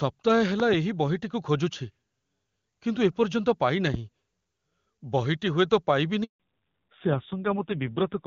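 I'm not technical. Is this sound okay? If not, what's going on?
No, not quite. Between 0.60 and 0.76 s there's a loud pop, actually two sharp clicks in a row, likely from a plug, switch or static jolt. At 6.24 s a handover gap cuts the speech out completely for about 160 milliseconds while the call hops networks. From 6.40 s to the end there's a fallback to narrowband: the HD Voice call drops to an older phone codec, losing everything above 4 kHz, so the voice sounds duller and rougher.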